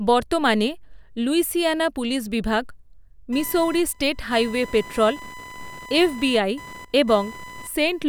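From 3.33 s to the end of the speech, computer activity noise appears: a chirping buzz pulsing around a thousand times per second, roughly 20 dB below the signal. Processor or graphics load shifts the shared ground of the audio circuit, so the noise tracks machine activity rather than the sound.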